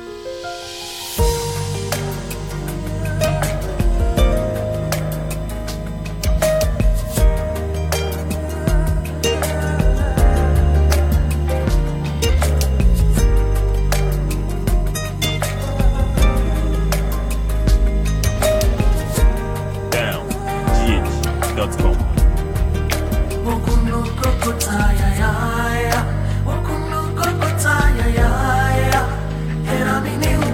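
A USB whine runs through the whole recording: a steady 1 kHz tone, roughly 30 dB below the signal, from current drawn in 1 ms bus frames leaking through power or ground. Unlike mains hum at 50 or 60 Hz, it sits far higher and stays fixed in pitch.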